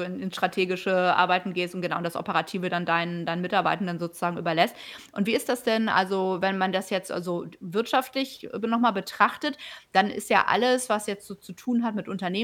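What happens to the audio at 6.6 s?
Nothing goes wrong at 6.6 s; the speech there plays through intact, with no dropout, click, distortion or other audible fault.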